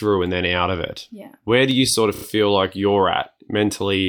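Dropped samples at 1.71 s: a single sharp click where the waveform jumps straight from one value to a later one. A fraction of a millisecond, likely only a handful of samples, is missing from the speech, far too little to hear any gap.

Repeated frames from 2.14 to 2.23 s: a short stutter in the speech. The stretch repeats three extra times in blocks of 21.8 ms, lengthening the audio by about 96 ms.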